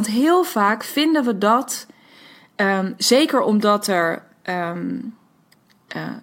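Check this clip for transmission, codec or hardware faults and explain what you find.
Nothing stood out on listening to this speech recording.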